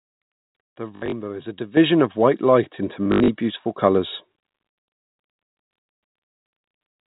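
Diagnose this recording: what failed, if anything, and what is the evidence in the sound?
Packet loss with the last packet repeated occurs at the network stage, from 0.96 to 1.12 s just before "is a", and again from 3.05 to 3.28 s right after "of white light into". The receiver filled each gap by replaying the last good packet. The longer runs (about 60 ms, then 80 ms) buzz at 50 Hz. That buzz points to 20 ms packets and gives a brief robotic stutter.

The microphone volume stepped up in the call-processing stage. The software judged the input too quiet and raised the device's input volume in a single jump. At 1.77 s, between "is a" and "of white light into", the voice and the background noise rise together by about 9 dB. A smaller step of about 3 dB follows at 3.81 s. Both are abrupt level changes, not gradual gain riding, and they sit on top of the G.711 telephone band, which stops at 4 kHz.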